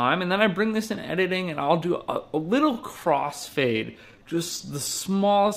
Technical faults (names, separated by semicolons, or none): time-stretched section